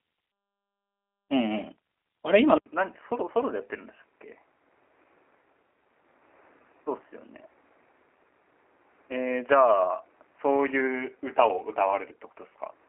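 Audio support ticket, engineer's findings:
G.729 codec, throughout. Speech sounds rough and synthetic, with buzzy, slightly metallic voicing, consistent with an 8 kbit/s G.729 voice codec. Its frame-by-frame model of vocal tract and pitch is plainly audible. Spectrogram: hard ceiling near 3.8 kHz, little below 250 Hz, blurred, smeared harmonics.

Input switched to a poorer device, from 2.58 s to end. An 80 ms dropout, then the sound turns dull and boxy, around 10 dB quieter, with a faint new noise floor well beneath the speech. Likely a microphone or headset-profile change. Waveform: gap, then smaller envelope. Spectrogram: band stops near 3 kHz.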